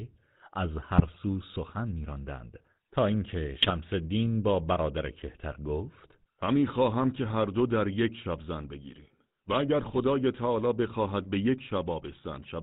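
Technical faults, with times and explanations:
Throughout: GSM full-rate codec. The speech has a buzzy, gravelly grain and nothing above 4 kHz, which fits the original 13 kbps GSM coder. It rebuilds each short stretch from a vocal-tract filter driven by a sparse, regularly spaced pulse train. That coarse excitation gives the rasp, and it sharpens on higher-pitched sounds. It differs from plain band-limiting by that rough buzz, and from bit errors by being steady rather than breaking out in bursts.
0.98–1.18 s, 3.60–3.73 s and 9.81–9.97 s: GSM bit errors. Each burst lasts between about 0.13 and 0.2 s. The speech turns into squawks, pops and gargling, then returns to the ordinary codec buzz. Corrupted filter, pitch and gain values reach the decoder, so a few frames come out with a bent spectrum or a sudden jump in level. The last burst has the densest errors. Unlike the steady codec roughness, these are brief, erratic outbursts.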